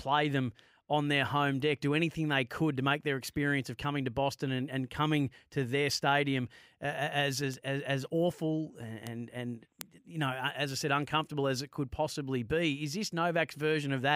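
Three bit error spikes sit in the speech, at 7.54 s, 9.07 s and 9.81 s. Each is a single flipped bit in a sample value, so the waveform leaps by a power of two for a sample or two and snaps straight back. The first two peak at about -20 dBFS, with the one at 9.07 s spanning what sounds like two adjacent samples. The last reaches about -8 dBFS. Each is heard as a brief, broadband tick with no relation to the speech.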